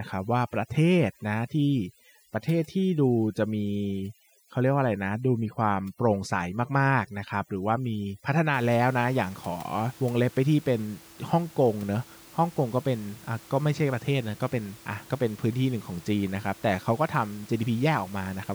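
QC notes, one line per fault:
0.00–8.54 s, overdone noise removal: the denoiser's cranked way too hard here, so any band sitting near its noise estimate gets gated right down, taking the quieter bits of speech with it. You get the background dropping away into little twinkly specks between phrases, until the room noise comes back at about 24 dB under the speech.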